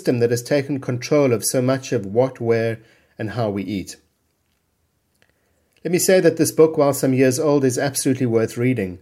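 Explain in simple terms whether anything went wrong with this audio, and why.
Nothing went wrong here.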